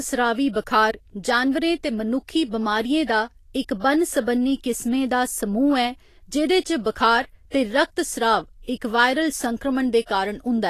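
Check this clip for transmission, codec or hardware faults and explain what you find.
Two codec faults are present: steady compression damage across the whole speech clip, and three short pre-echo events.

Vorbis compression runs throughout. The treble is hissy and grainy, and attacks sound blurred. Nothing is left above 14.2 kHz. The likely cause is low-quality Vorbis encoding, at a rate that fits about 34 kbps. At that rate the encoder keeps a smooth spectral outline but quantises the upper detail very coarsely. That detail turns into noise of similar energy, so the top end sounds rough and gritty.

Pre-echo occurs three times: 3.04 to 3.09 s, 8.62 to 8.68 s, and 10.06 to 10.09 s. The smears last about 50, 53 and 30 ms. Each time, a short hiss arrives just before a sharp onset. The codec spreads its noise evenly across a whole transform block. A loud attack late in the block sets the noise level for all of it. 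So the quiet moment before the attack fills with hiss, and the onset sounds softened.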